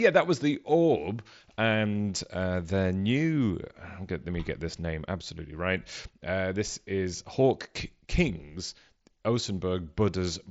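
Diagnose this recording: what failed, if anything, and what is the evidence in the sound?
Nothing failed, and the sound gives no evidence of a fault; the speech comes through the Bluetooth mSBC headset path as that path is expected to sound.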